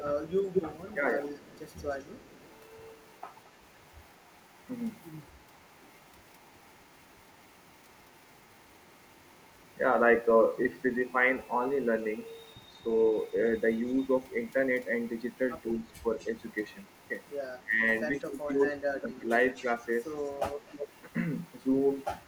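Speech with a faint delayed copy of itself trailing behind it. This echo leak appears at 0.0–2.55 s, 3.14–3.5 s, 12.99–14.17 s, 15.74–17.36 s and 18.17 s to the end. The lag grows from 218 to 250 ms, and the copy sits roughly 20 to 35 dB below the speech. A far-end loudspeaker's echo canceller likely let it through. Speech suppressed in double talk also occurs. At 15.73–16.05 s the level dips slightly, about 5 dB, for roughly a tenth of a second. At 17.61–19.3 s it falls much deeper, about 20 dB, for around a second overall. The canceller likely clamped down while both sides overlapped.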